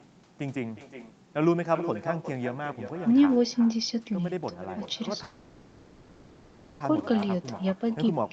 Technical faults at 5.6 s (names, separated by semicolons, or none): echo with no canceller; call audio freeze